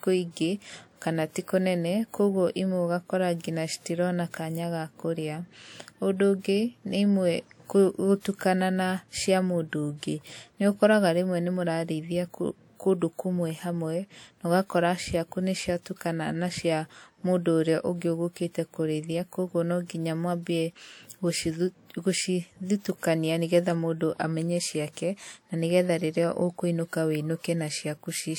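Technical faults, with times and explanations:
8.20 to 8.25 s, pre-echo: a short hiss of about 47 ms rises just ahead of a sharp attack, which then lands smeared. Coding noise sized for the loud onset spread back through its block; unlike an echo, it comes before the sound.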